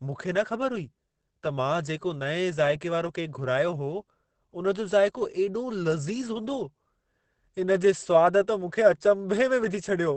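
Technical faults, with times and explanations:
Throughout, Opus compression: the speech sounds muffled and hoarse, with nothing above 8.6 kHz and heavy damage, pointing to a likely low-rate Opus encode in its speech mode, around 12 kbps.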